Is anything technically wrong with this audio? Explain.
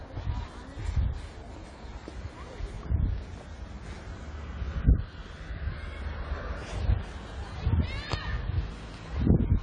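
Yes. AAC compression damage runs throughout the clip, from start to finish. Nothing is heard above 10 kHz, and the sound is dull and smeared, with a warbling, fizzy texture on sustained parts. This is likely an AAC-LC encode at a low bitrate, consistent with roughly 24 kbps. With so few bits, the encoder lowers its cut-off and quantises the remaining frequency lines coarsely, leaving gaps or substitute noise in the spectrum.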